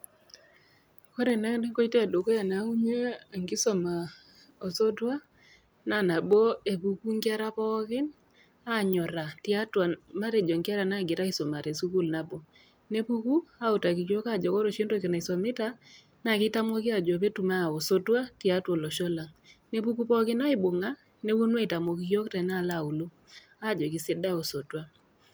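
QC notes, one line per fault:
1.30 s, 6.33 s, 20.27 s, 21.88 s, dropped samples: four isolated sharp clicks in the speech, each a thin vertical line in the spectrum, likely from a fraction of a millisecond of samples going missing so the waveform jumps. No audible gap or muting, unlike a dropout.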